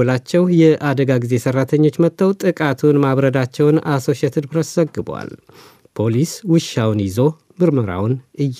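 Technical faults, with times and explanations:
2.29 to 4.73 s, sample clock jitter: the converter's timing wanders by roughly 4 microseconds, so samples land slightly early or late. The error grows with waveform slope, adding hiss and roughness about 35 dB below the speech that rises with loud, bright sounds and disappears in pauses.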